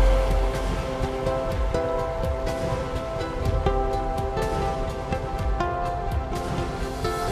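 No technical faults can be heard anywhere here.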